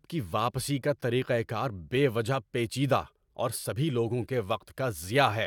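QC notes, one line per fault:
QC notes: no fault found in this speech clip.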